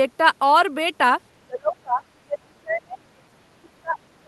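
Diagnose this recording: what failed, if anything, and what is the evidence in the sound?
The call processing stage failed, most likely the echo canceller misjudging double talk. The speech is suppressed in double talk from 1.37 to 2.05 s and again from 2.23 s to the end, dropping by as much as roughly 30 dB. When near and far ends overlap, a canceller that cannot tell its own talker from loudspeaker echo attenuates everything. The voice therefore sinks and breaks up under the Opus call path's limited 12 kHz bandwidth.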